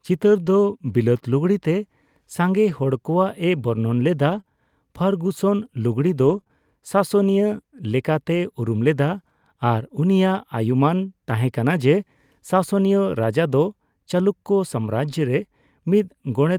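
From about 0.45 to 6.51 s there are scattered short gaps: a handful of packets, roughly four, went missing or arrived too late, spread across that stretch. Around 80 ms of speech was lost in total, and the receiver papered over it by stretching the last bit of sound, touching about 180 ms. None of the holes is long, so the speech stays clear, but you catch small ticks and little smeared hiccups here and there.

Later, at 11.01, 13.49 and 15.09 s, each spot sounds like a single lost packet rebuilt from error correction. The packet after each one carried a low-bitrate backup copy, and the decoder played that instead, so there's no dropout at all. What gives it away is texture: each 20 ms patch comes out a bit rougher and noisier than the speech around it, a brief grainy blip rather than a gap.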